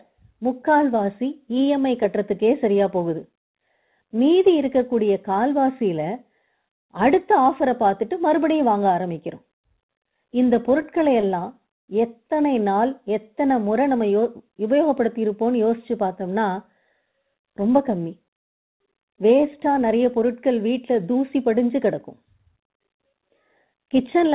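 From 10.82 to 11.43 s the speech shows repeated stalls, a stutter. Packets arrived late, so the jitter buffer ran dry four times. Each gap, the longest about 20 ms, was filled by stretching the last sound. Nothing is lost, but the phrase drags and hiccups. The narrow band, with nothing above 4 kHz, fits a G.711 mu-law call path.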